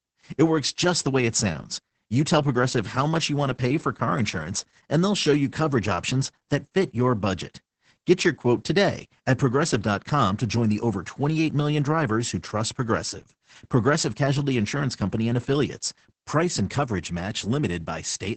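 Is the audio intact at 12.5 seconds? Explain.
No. Opus voice compression runs throughout. Wideband SILK coding cuts everything above 8.7 kHz, and its coarse coding leaves speech muffled, hoarse and slightly robotic, which fits a very low bitrate.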